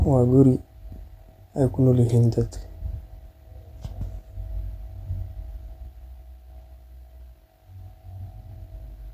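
No technical faults can be heard anywhere in the speech.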